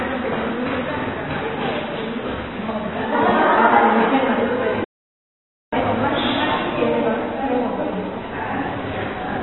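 AAC compression runs through the whole clip, from the first moment to the last. Nothing is present above 4 kHz, and the heavy damage sounds dull, smeared and warbly, with a fizzy edge on sustained and noisy parts. This is likely a low-bitrate AAC-LC encode, which fits a rate near 16 kbps. At that rate the encoder lowers its bandwidth ceiling and quantises the remaining frequency lines so coarsely that bands thin out or smear.

A playback stall occurs from 4.84 to 5.73 s. The sound cuts out mid-flow and the output stays silent for about 0.88 s before resuming. The likely cause is the player running short of data or its output thread being held up, so nothing reached the output until it recovered.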